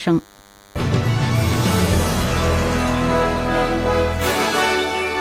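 From start to finish, a DECT cordless phone buzz sits under the sound. A nearby DECT handset or base fires a brief radio burst every 10 ms, and something in the audio path rectifies it into a thin, steady buzz at 100 Hz. It sits well below the wanted sound, roughly 30 dB down. On a spectrogram it forms an unbroken comb of horizontal lines at 100 Hz and its multiples, reaching high up, and the waveform shows small spikes repeating at 10 ms intervals.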